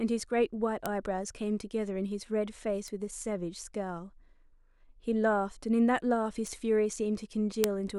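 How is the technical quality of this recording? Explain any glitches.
There are four bit error spikes in this speech clip. A single flipped bit makes one sample, or two at 7.64 s, jump by a power of two and snap back. Each one lands as a sharp, broadband tick that has nothing to do with the voice. They fall at 0.86 s (about -10 dBFS), 2.88 s and 6.47 s (both about -22 dBFS), and 7.64 s, the loudest at about -4 dBFS.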